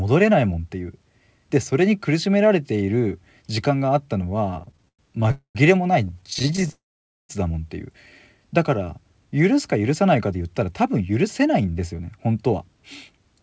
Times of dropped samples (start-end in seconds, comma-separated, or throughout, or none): none